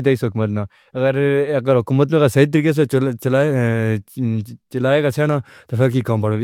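No technical faults can be heard anywhere in this speech recording. It runs without any break, glitch or other disturbance.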